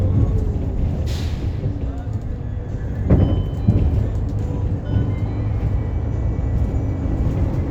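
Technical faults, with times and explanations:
Nothing in this recording of sounds registers as a technical fault. There are no times or explanations to list.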